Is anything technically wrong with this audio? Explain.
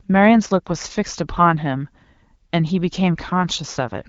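No, nothing is technically wrong: the speech passes through the AMR wideband (HD Voice) codec at 12.65 kbit/s, working as intended at that rate, and no fault can be heard.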